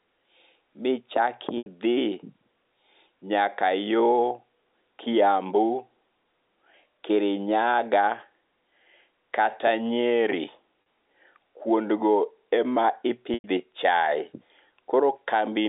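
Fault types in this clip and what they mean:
Packet loss with pitch repetition: Audio packets went missing. The receiver bridged each gap by repeating the last pitch cycle and fading it out. Gaps fall at 1.58 s (80 ms), 10.82 s (40 ms) and 13.34 s (100 ms). The short one sounds buzzy and held. The longer ones fade toward silence.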